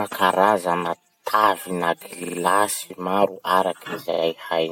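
A two-frame run of compressed audio was sent again, repeated frames, so the decoder replays a 46.4 ms block. At 2.23 s, after "karazana tavina", it plays three extra times, adding 139 ms; at 4.11 s twice more, adding 93 ms, each a stutter.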